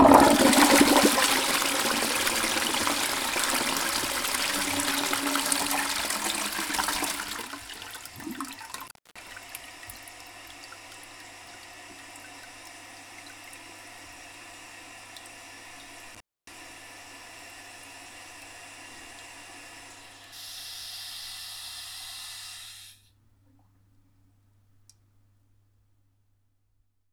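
At 8.71 to 9.32 s, and again at 16.14 to 16.54 s, an intermittent contact breaks the signal. A loose connection opens for about 0.28 s, then 0.27 s. The sound drops out, leaving faint hiss, with crackle as contact breaks and returns.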